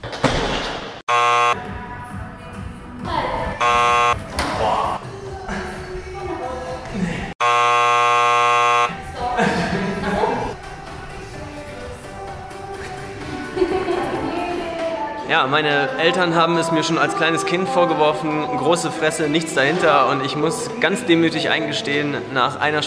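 No faults are audible anywhere in the recording.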